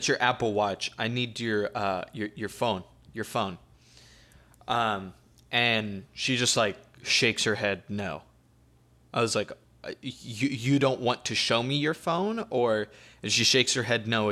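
No technical faults can be heard anywhere in this speech recording.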